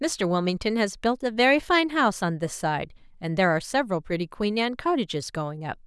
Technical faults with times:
none

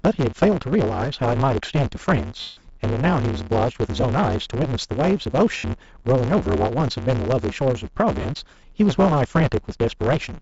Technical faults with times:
0.00-10.41 block size mismatch (truncated)
0.00-10.41 Bluetooth LC3 compression
2.41-2.57 lost LE Audio frames
4.01-4.03 lost LE Audio frames
5.57-5.64 lost LE Audio frames
8.21-8.25 lost LE Audio frames

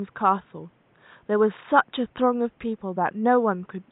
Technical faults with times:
none

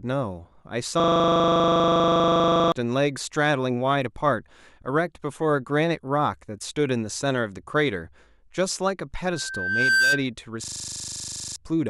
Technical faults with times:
1.00-2.72 system hang loop
9.25-10.24 loudspeaker feedback squeal
10.64-11.56 system hang loop

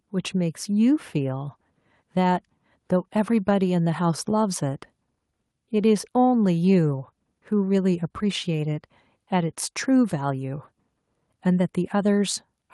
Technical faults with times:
none

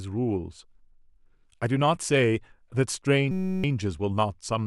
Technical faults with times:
3.31-3.64 system hang loop

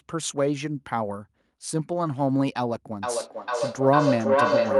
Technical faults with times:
3.03-4.79 feedback howl

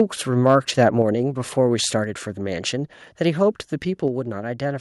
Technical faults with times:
0.80-0.83 microphone overload
1.02 microphone volume stepped down
2.04 microphone volume stepped down
4.08 microphone volume stepped down

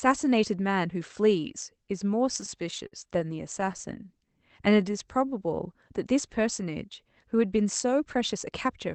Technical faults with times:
2.25-3.81 repeated stalls (stutter)
4.25-5.64 jitter buffer slow-down
7.56-8.66 jitter buffer speed-up

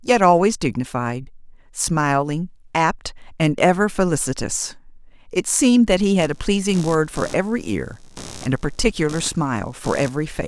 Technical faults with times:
6.21-10.47 computer activity noise

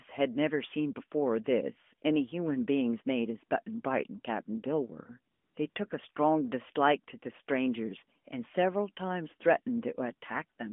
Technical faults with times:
5.34-5.76 AMR comfort noise

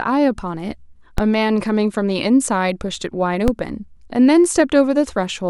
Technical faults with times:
1.18 DC step
3.48 DC step

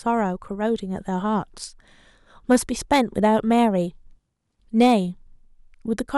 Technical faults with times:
2.51-2.56 hard clipping
2.93-3.61 hard clipping
4.80-4.94 hard clipping

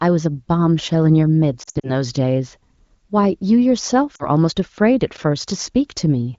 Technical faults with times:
1.63-1.90 lost AMR speech frames
4.15-4.29 lost AMR speech frames
5.17 block of digital silence

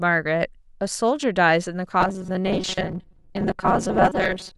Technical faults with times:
2.01-4.57 robotic sound from repeated short buffers

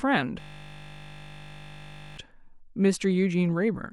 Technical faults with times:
0.40-2.17 system hang loop

